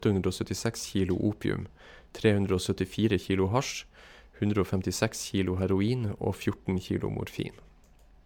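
From start to finish the speech carries generation loss, most likely from repeated MP3 encoding at around 128 kbit/s, about five passes. Each decode and re-encode requantises on a shifted frame grid, so the noise and spectral gaps stack up. The result is swirly, hollow and smeared beyond what that bitrate alone would give, with consonant attacks blurred. Nothing is present above 19.9 kHz, consistent with the encoder's low-pass.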